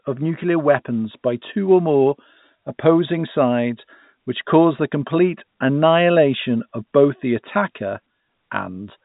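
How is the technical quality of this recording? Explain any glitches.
No glitches can be heard anywhere in the recording. The speech arrives over a G.711 A-law telephone path at 64 kbps, so nothing reaches above 3.8 kHz and any coding noise stays faint.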